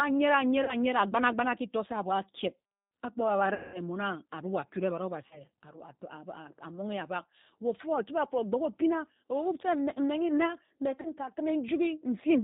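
G.729 codec, throughout: the speech sounds rough and synthetic, a plainly audible sign of this 8 kbit/s codec rebuilding each frame from a filter and a few pulses, with nothing passing above 4 kHz.

VoIP packet loss concealed by the speech codec, at 0.64–0.75 s, 3.54–3.81 s just before "mmon akure ebad", 5.27–5.42 s just after "mmon akure ebad", and 11.01–11.11 s: the decoder fills gaps of 40 ms (200 ms at 3.54 s) with a fading extension of the preceding sound, a buzzy tone or a coloured noise, and the speech recovers slowly afterwards.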